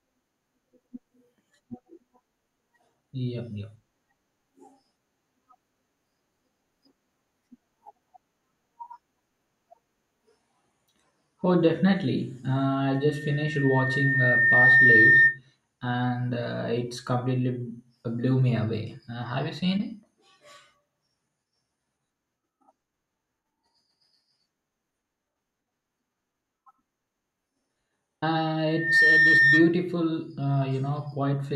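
It's a speech recording with loudspeaker feedback squeal twice: a 1.8 kHz tone swells over about two seconds from 12.94 to 15.39 s, then flares almost instantly from 28.67 to 29.77 s, both around 10 dB above the speech. The microphone is re-amplifying its own loudspeaker until that frequency runs away.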